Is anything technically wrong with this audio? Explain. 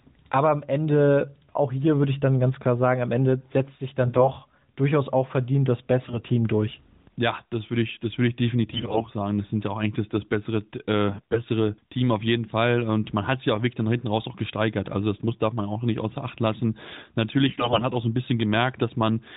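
Yes, there are AMR bit errors at 4.04–4.31, 6.02–6.19, 8.72–9.04, 11.08–11.41 and 17.48–17.85 s. Roughly 5 to 10 percent of the less protected codec bits got flipped, so pulse positions and gain values go wrong and the speech briefly turns hoarse and gargly. The underlying narrowband mobile coding, which sounds like AMR-NB at around 12.2 kbps, adds only light damage, though nothing above 4 kHz passes.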